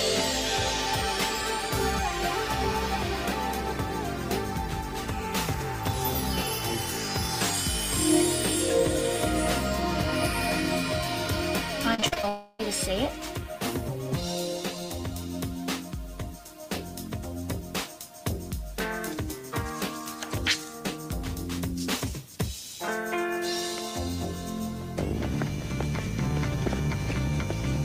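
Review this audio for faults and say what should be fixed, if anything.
Packets were repeatedly lost or delayed between 11.94 and 12.25 s, causing repeated packet loss (robotic sound). Five gaps, the longest 40 ms, were patched by extending the preceding sound, so about 41% of that span is filler. The result is choppy audio with small pieces missing.

From 12.29 to 12.61 s, a long network dropout likely cut the stream for about 300 ms. That whole stretch is filled with a continuation of the last sound rather than silence. The original material is gone, and the audio resumes afterwards without it.

A larger adaptive jitter buffer, forward error correction or redundant packets, and a more stable network path would prevent both problems.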